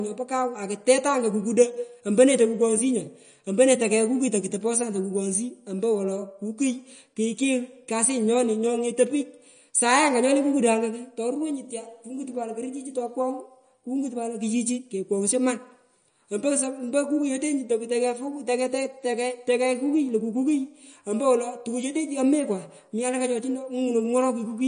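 MP3 compression runs throughout this speech recording: nothing is present above 9.6 kHz, and the plainly audible watery smearing likely comes from a low bitrate around 40 kbps. Sample clock jitter starts at 19.74 s and runs to the end. Timing wobble of about 0.7 µs adds a rough hiss roughly 40 dB below the signal, strongest on loud, bright sounds.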